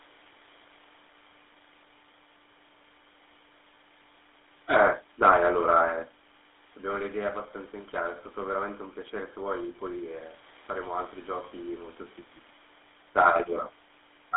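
From start to finish the speech carries a buzzy, gravelly GSM full-rate codec roughness, which fits a 13 kbit/s coder. A spectrogram shows a 300 Hz to 3.6 kHz band with nothing above 3.8 kHz.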